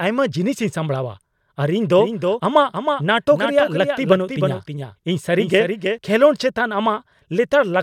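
A slower capture path likely mixed the speech in twice from 1.98 to 5.98 s, a doubled audio track trailing about 300 ms, roughly 5 dB quieter.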